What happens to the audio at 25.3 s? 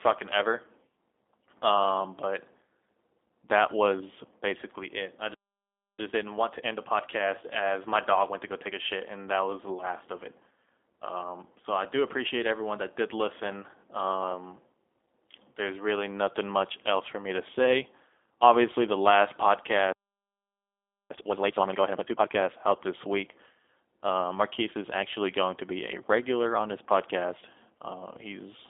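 At 25.3 s the speech still carries the G.729 codec artefacts running through the whole clip: nothing above 3.7 kHz, and a rough, synthetic edge from pulse-based resynthesis, which fits an 8 kbit/s stream.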